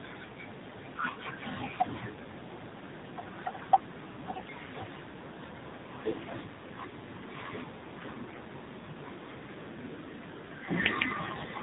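Speech that sounds buzzy, synthetic and boxed-in, with nothing above 4 kHz, shows the AMR narrowband mobile codec at a plainly audible low mode, which fits around 7.4 kbps. At 4.34–4.51 s and 8.26–8.40 s the voice keeps its pitch and level but turns hoarse, scratchy and gargly. These are AMR bit errors: a few percent of the less protected bits in several frames arrived flipped, misplacing excitation pulses and corrupting finer parameters.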